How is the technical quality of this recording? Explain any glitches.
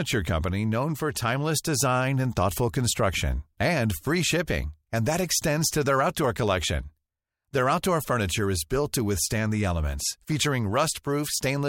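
No technical faults are audible anywhere in the speech recording, so there are no glitches to explain.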